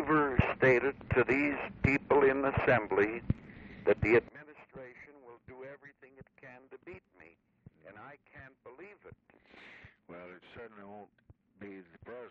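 One channel inverted, from 4.29 s to the end: the level falls by about 24 dB and only a faint residue of the sound remains. The likely cause is reversed polarity on one stereo channel, so material shared by both channels cancels when summed to mono.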